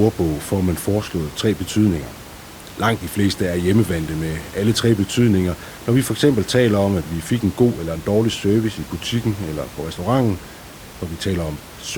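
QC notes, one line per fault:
No technical faults found.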